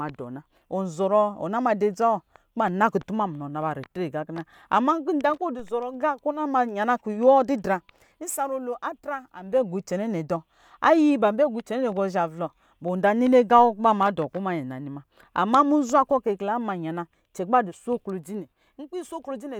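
A DC step occurs at 5.59 s in the speech: the waveform's zero line jumps abruptly to a new offset, then drifts back as a roughly 2 Hz high-pass drains it away. The sudden shift is heard as a brief low thump while the speech carries on unaffected.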